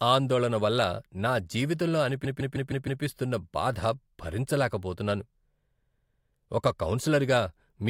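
A short run of compressed frames was delivered more than once, so the decoder played the same block of about 157 ms six times in a row. Just after "ఆందోళన వల్ల నా జీవితంలో", from 2.24 s to 3.02 s, the speech stutters: that fragment loops five extra times before moving on. This repeated-frames fault adds about 0.78 s to the clip, and the block length fits a group of several codec frames being resent together.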